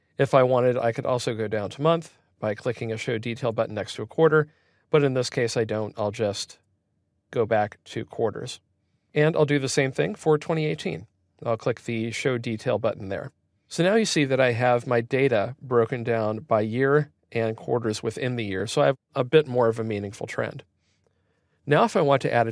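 No technical faults can be heard anywhere in the audio.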